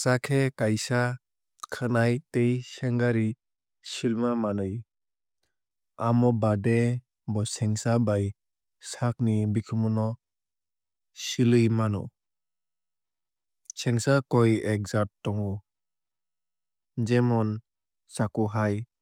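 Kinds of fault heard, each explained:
De-emphasis applied wrongly: from 2.36 to 5.71 s the speech turns dull and muffled, as though a treble-cut stage meant to reverse pre-emphasis were acting on audio that never had that boost. Levels fall smoothly with rising frequency, about 8 dB lower at 10 kHz than at 1 kHz. On a spectrogram the upper bands fade gently for that stretch and brighten again afterwards. The waveform looks slightly rounder, with softer sharp transients.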